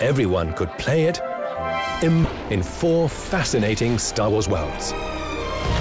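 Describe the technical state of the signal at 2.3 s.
Just before 2.3 s, at 2.24 to 2.26 s, there is a skip ahead. About a second of audio was thrown away, probably by a jitter buffer that overflowed while later packets were already queued. Playback leaps straight to the newer material with no silence filling the join. That missing gap is what separates it from a dropout or concealed packet loss, which hold the timeline and leave a hole or a smeared fill. Here the two sides simply butt together, with nothing above 8 kHz on either side.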